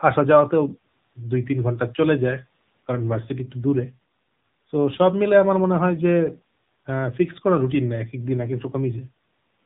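A speech clip carrying plainly audible AMR narrowband mobile codec damage throughout: nothing survives above 4 kHz, and the voice turns buzzy and synthetic, which fits a low AMR-NB mode near 7.4 kbps. That buzz sets it apart from a simple telephone-band filter.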